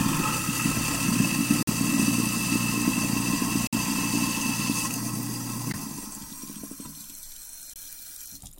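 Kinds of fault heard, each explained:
Gap between stream segments: misaligned segment timestamps leave silent, hard-edged holes of 15 to 56 ms roughly every 2 s, at 1.63, 3.67, 5.72 and 7.74 s.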